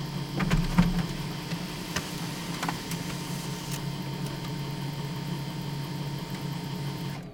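No technical faults can be heard anywhere in the recording; the signal stays continuous throughout.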